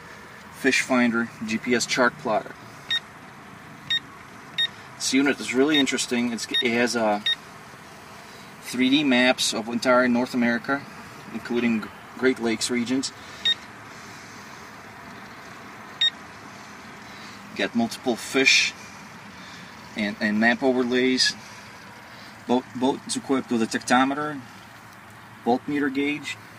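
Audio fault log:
5.09–7.23 s, GSM signalling bursts: a nearby 2G phone sends brief clusters of radio pulses while signalling to its network. The audio circuitry rectifies them, giving a galloping dit-dit-dit of short 217 Hz buzzes, sitting roughly 20 dB below the signal.
7.25–8.77 s, GSM phone buzz: a nearby 2G phone is now in a call and transmits steadily at 217 bursts per second. Rectifying each radio pulse yields a constant, hard, raspy 217 Hz buzz rich in harmonics, about 28 dB below the signal and unrelated to it.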